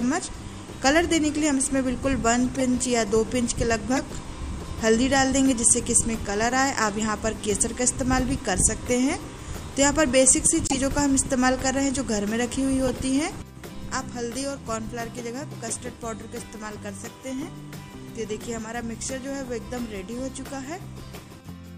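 Short chirps and bursts of noise break into the audio at 2.51–2.57 s, 3.96–3.99 s, 7.69 s, 10.67–10.77 s and 12.87–12.95 s, the 7.69 s one faint, the others loud. Each is a corrupt frame decoded: damaged compressed data played anyway, misplacing energy in frequency.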